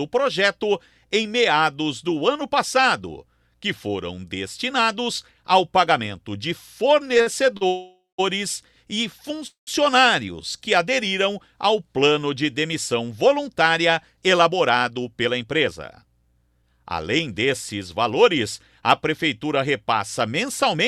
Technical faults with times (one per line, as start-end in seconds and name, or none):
7.17-7.63 repeated stalls (stutter)
7.67-8.20 call audio freeze
9.47-9.69 call audio freeze
10.25-10.58 jitter buffer slow-down
13.01-17.97 jitter buffer speed-up